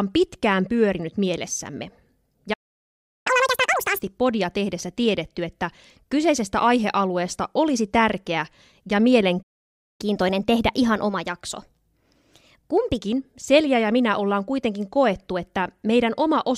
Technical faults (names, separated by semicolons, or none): playback stall; catch-up at higher speed